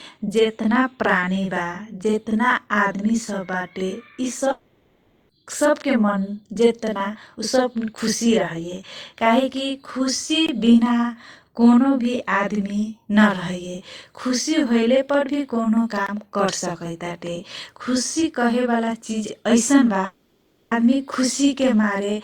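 Right from the start there's a channel delay doubling running through the whole clip. One channel trails the other by about 42.7 ms, which fits a 2048-sample buffer, and once they're folded to mono you hear every syllable twice, like a tight slap echo at equal level.

From 4.51 to 5.32 s there's a long network dropout, most likely lost packets. About 780 ms of audio never made it, and the receiver papered over the entire gap by smearing the last sound into a fading buzzy hiss. The speech then picks up further along with that stretch simply gone.

Then come two blocks of digital silence, at 10.47 to 10.49 s and again at 16.07 to 16.09 s. Each is a 20 ms run of zeros, probably the output buffer not getting filled in time. The signal snaps off and back with no fade, so each one sounds like a quick hole.

The second dropout hits from 20.05 to 20.74 s. It behaves the same way: about 660 ms is missing, covered the whole way by that decaying buzz, and the audio resumes past the lost section.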